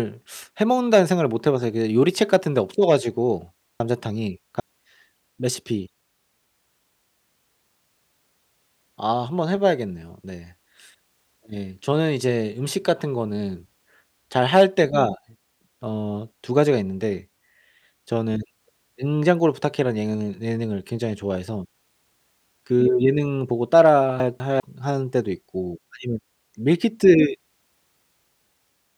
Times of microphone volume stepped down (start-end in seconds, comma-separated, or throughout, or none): none